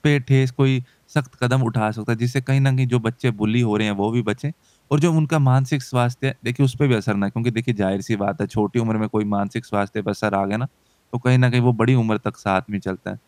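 No technical faults can be heard.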